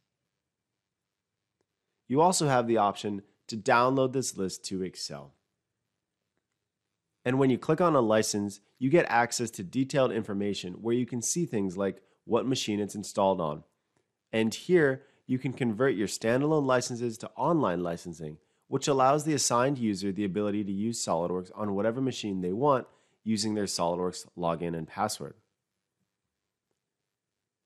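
Throughout, the sound is dull and gurgling, with upper bands flickering on and off. This is likely MP2 compression starved of bits, consistent with about 80 kbps. The band switching sets it apart from a steady low-pass filter.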